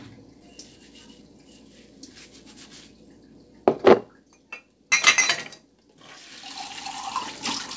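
A recording of everyday sounds, carried over a WebRTC call path whose band stops at 8 kHz (consistent with a wideband codec such as G.722), with two timing faults. At 0.42 to 0.44 s there is a skip ahead: about 0.4 s of audio was discarded, either lost in transit or dropped when the jitter buffer overflowed, so playback leaps forward and the two sides are butted together with no fill. From 1.00 to 1.30 s a jitter buffer speed-up trims around 50 ms of excess buffered audio by cutting out short pitch-period slices, so the sound runs at 114% speed while keeping its pitch and briefly feels rushed.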